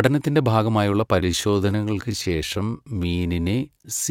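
Speech recording with a time-stretched section running from 1.11 s to the end of the clip. At that point the pace drops abruptly to about 0.685 times the original speed while the pitch stays unchanged, so the speech turns drawn-out. This is likely the result of software stretching the audio to fill a set length, repeating short fragments to lengthen it while holding the pitch constant.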